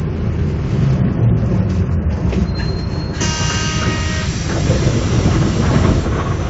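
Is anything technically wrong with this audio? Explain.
No, nothing here is actually wrong: these everyday sounds just carry the marks of ordinary call microphone processing, with the content topping out around 8 kHz and the very lowest bass trimmed away by its high-pass filter, which is exactly what that path is meant to do.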